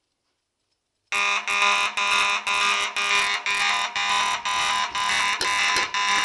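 Throughout, there's a doubled audio track: a second, equally loud copy trails by about 0.4 s, likely from a slower capture path picking everything up twice.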